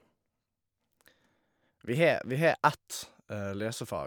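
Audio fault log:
No fault found in this speech clip.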